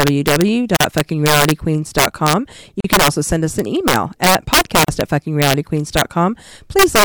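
It's a speech recording with two faults. Integer overflow runs throughout: the loudest peaks are pushed about 7 dB past the limit, and instead of being held there they wrap to the opposite sign. So a small fraction of samples flip across the full range, giving sharp, violent cracks on loud syllables that are harsher than clipping. There's also a gap at a join of encoded pieces every 2 s: roughly 40 ms silences at 0.77, 2.80 (right before "can also send us") and 4.84 s (right after "us an email at"). Separately encoded chunks were likely joined without trimming the encoder's start delay and end padding, so each join leaves a short hole with smeared edges before the speech resumes where it stopped.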